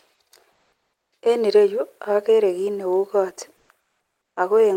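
Comfort noise in place of the background appears in this speech at 0.52–1.12 s, 3.56–3.69 s and 3.80–4.36 s: the real background turns into a steady, featureless hiss, about 3 dB louder in the first gap and about 4 dB quieter in the last. This likely comes from discontinuous transmission such as Opus DTX, with the receiver synthesising noise while the sender pauses.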